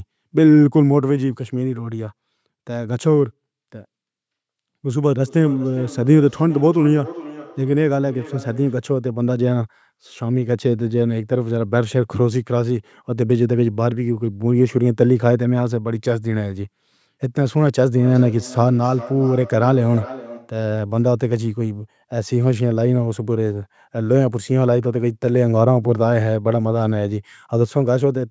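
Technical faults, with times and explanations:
5.24–8.9 s and 17.97–20.6 s, feedback echo between two devices: the speech returns at intervals of roughly 0.4 s, peaking at about 16 to 17 dB below the direct speech, because a second device in the room replays this microphone's signal and this microphone's echo canceller ignores that playback.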